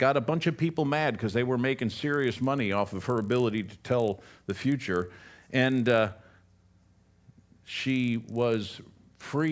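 A resampler restarted on every block, converting 44.1 kHz to 16 kHz in 20 ms blocks with no memory of neighbouring samples, so each block edge carries a small error. From 2.12 s, after "because they were making", this becomes a 50 Hz buzz riding on the speech through to the end.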